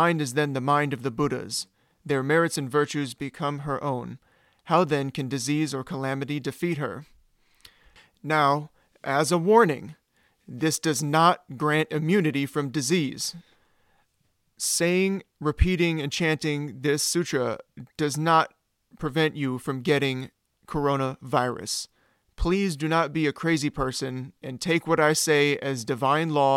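No technical faults are audible.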